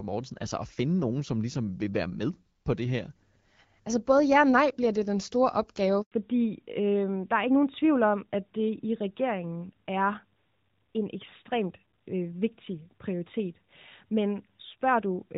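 Speech carried as HD Voice through AMR wideband up to 6.02 s, then a handover gap of 100 ms silences it while the call switches networks, showing as a flat waveform and blank spectrogram column. From 6.12 s a fallback to narrowband (AMR-NB) cuts everything above 4 kHz, leaving an empty upper spectrogram band and a duller, rougher sound.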